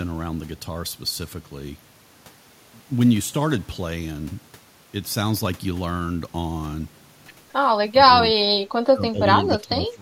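An echo canceller likely could not separate this side's speech from the overlapping far-end echo and clamped both, causing speech suppressed in double talk at 7.99–8.57 s, 8.92–9.27 s and 9.5 s to the end. The speech dips sharply, by around 25 dB at worst.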